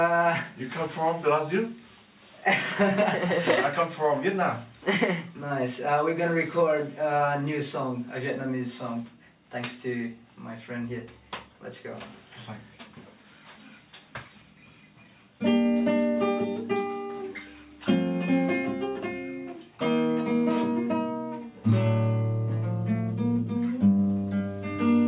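Listening closely, nothing in the audio stood out as a technical problem at any point.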